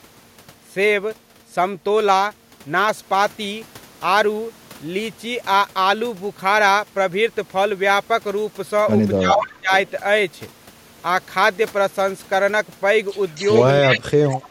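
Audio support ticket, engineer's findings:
Speech suppressed in double talk: echo canceller likely clamped its own talker along with the loudspeaker echo while both sides talked. Speech dips about 20 dB at 9.18–9.71 s and about 25 dB at 13.8–14.51 s, roughly half a second each.

Echo leak: far-end canceller likely passed residual loudspeaker pickup back. Delayed copy 281 ms behind at 13.35–13.67 s (about −20 dB), 13.93–13.98 s (about −10 dB), 14.42–14.48 s (about −30 dB).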